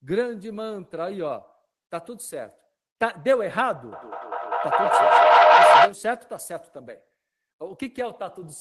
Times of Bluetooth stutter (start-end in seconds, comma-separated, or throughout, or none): none